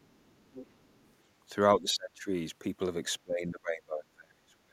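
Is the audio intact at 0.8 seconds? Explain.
No. From 0.01 to 1.13 s, the other side's voice leaks through faintly, about 25 dB below the main speech. It is likely played by the talker's own loudspeaker, picked up by the microphone, and left incompletely removed by the echo canceller.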